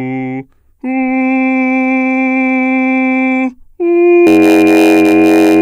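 A block size mismatch (padded) begins at 4.26 s and runs to the end of the music. One stage is delivering blocks slightly shorter than the next stage expects, so each block ends with a short stretch of zeros. Those regular gaps produce a buzz at about 91.9 Hz, the block rate. Because every block is stretched by the added silence, the music plays at 0.919 times its proper speed while keeping roughly its normal pitch.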